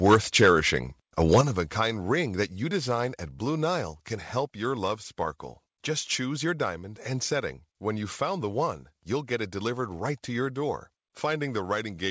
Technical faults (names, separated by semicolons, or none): microphone overload; microphone volume stepped down